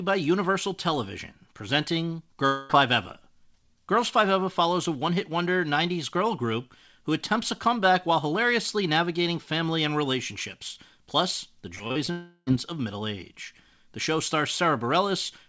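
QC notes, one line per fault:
2.46–2.71 s and 12.11–12.49 s, long network dropout: about 240 ms and 360 ms of audio never arrive, most likely lost in transit. The receiver stretches the last sound into a fading buzz. The second ends with 20 ms of near-silence before "of middle". On a spectrogram these are smeared, repetitive harmonic bands. On a waveform they show as an unnaturally even decaying envelope.
11.75–12.09 s, repeated packet loss (robotic sound): right after "and relationships plus the", four short holes (the longest 41 ms) are patched by repeating the previous sound. About a third of the span is concealed, so the sound turns choppy with pieces missing. A spectrogram shows striped, stuttering bands and a waveform shows repeated, clipped-looking segments.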